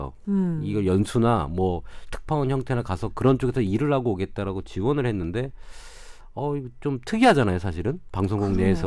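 No technical faults are audible.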